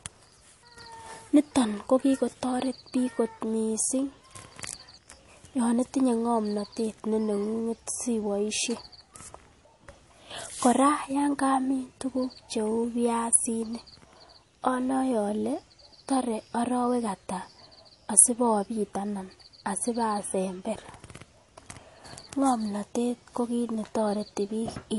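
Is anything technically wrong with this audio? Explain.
Yes. Throughout the speech, the sound is watery and swirly, s sounds chirp metallically, and nothing is present above 11.3 kHz. This is likely MP3 compression: short of bits, the encoder zeroes weak frequency lines that flicker between frames and cuts the treble, consistent with a bitrate near 48 kbps.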